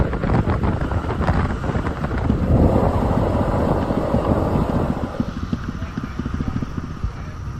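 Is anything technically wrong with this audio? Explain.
No, nothing in the signal shows a technical fault; it reaches the listener intact and undisturbed throughout.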